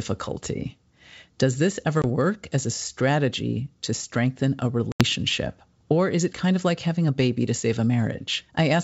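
At 2.02 s a brief hole, about 20 ms, cuts into the speech just before "work as a strategy", and at 4.92 to 5.03 s, right after "strategy to strengthen a", a longer hard-edged gap of about 80 ms follows. Both are packet loss on an ADPCM call, consistent with roughly one and then four lost packets. The silence fills each hole, and the decoder's adaptive predictor and step size must drift back into step with the sender's, even in this 64 kbit/s G.722 wideband stream.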